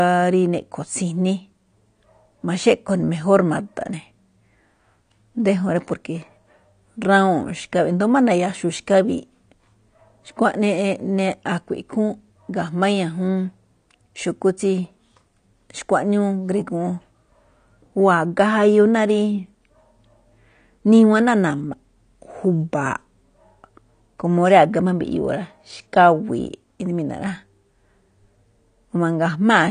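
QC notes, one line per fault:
Throughout, AAC compression: the speech has nothing above about 9.7 kHz and plainly audible codec damage, with a dull, smeared top end and a warbling, fizzy grain on sustained sounds and sibilants. The likely cause is AAC-LC at a bitrate low enough, consistent with around 32 kbps, that the encoder lowered its cut-off and quantised the remaining frequency lines so coarsely that bands were emptied or patched with noise.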